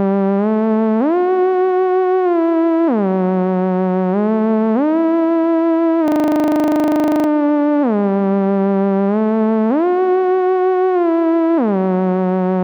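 A system hang loop runs from 6.08 to 7.28 s: one 40 ms fragment of the audio repeats about thirty times, giving a rapid 25 Hz buzzing stutter. The host or driver stalled while the hardware kept replaying its ring buffer, then playback resumed with essentially nothing missing.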